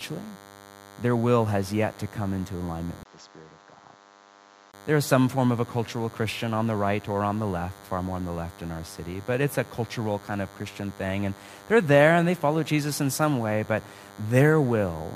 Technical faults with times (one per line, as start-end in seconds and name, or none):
0.00-15.16 DECT cordless phone buzz
3.03-4.74 input switched to a poorer device